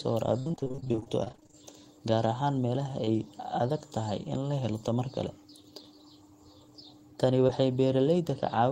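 Speech that turns choppy and robotic between 0.39 and 1.55 s, with pieces missing. This is repeated packet loss: about two dozen holes, the longest 63 ms, each patched by extending the previous sound, so nearly half that stretch is filled-in audio. Brief smears or wobbles follow at 3.05–3.09 s and 7.47–7.50 s, each short concealed packet loss: roughly 20 ms of audio arrived too late, and the receiver bridged the gap by continuing the last sound before blending back.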